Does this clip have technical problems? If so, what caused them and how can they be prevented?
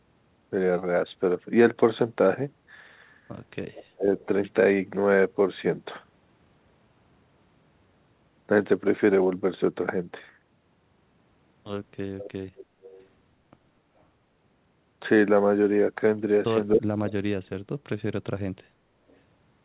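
Yes. Echo leak appears at 3.73–3.84, 4.17–4.26, 12.18–12.31, 12.56–12.66, 12.82–13.07 and 19.09–19.17 s. Faint copies of speech arrive 279 ms late, about 20 to 40 dB below the talker. This is likely residual loudspeaker pickup that the far end's echo canceller missed. On a spectrogram it shows as weak, smeared repeats of earlier harmonic patterns. Using a headset or retuning that canceller's residual suppression would prevent it.

Speech suppressed in double talk occurs at 3.91–4.08 s and at 16.75–17.92 s, where the level drops by roughly 35 and 40 dB. The longer event loses about a second of sound in pieces. The likely cause is an echo canceller that could not separate the talker from echo and turned both down. On a waveform the envelope shows abrupt notches. Better double-talk detection, or headsets that remove the echo, would prevent it.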